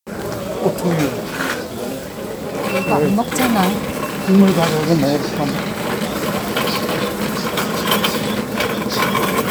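Nothing here gives away a technical problem, just a recording of sounds coming through without any fault you can pick out by ear.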